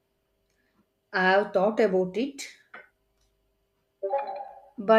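Nothing in the recording trips the ear at any point, with no faults turning up anywhere along the way.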